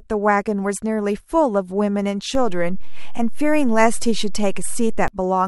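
At 2.35 s a low thump cuts under the speech, and a second, matching thump follows at 5.08 s, while the talking carries on unaffected throughout. This is a DC step: the waveform's zero line jumps by about -16 dBFS at 2.35 s, as happens when a converter recalibrates or an input carrying an offset is switched in. The offset holds for almost three seconds, then steps back, producing the second thump.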